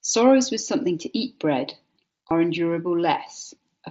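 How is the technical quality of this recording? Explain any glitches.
A brief glitch at 2.29 s from concealed Bluetooth headset packet loss. The wideband mSBC headset link caps the speech at about 8 kHz, with light graininess on louder passages.

At 2.29 s, roughly 15 ms of audio went missing between headset and phone, which fits two lost packets. The receiver filled the gap by repeating the closest-matching recent waveform, leaving a brief buzzy blip.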